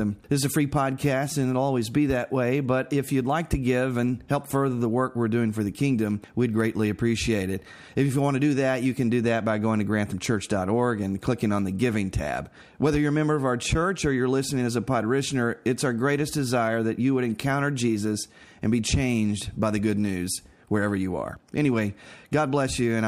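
No technical faults can be heard at any point in the audio.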